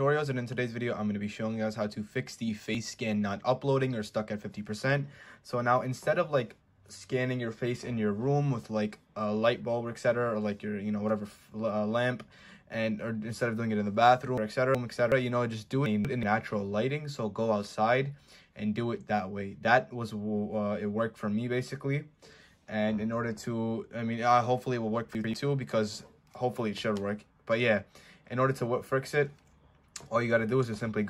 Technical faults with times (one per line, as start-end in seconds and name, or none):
14.38-15.12 frames out of order
15.86-16.23 frames out of order
25.15-25.34 frames out of order